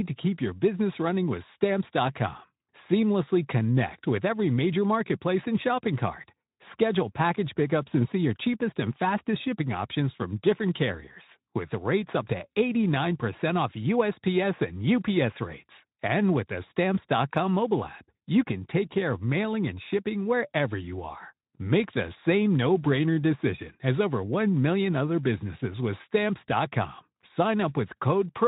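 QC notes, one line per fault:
Nothing to flag here; the speech comes through the Speex link with only the light coding you'd expect from it.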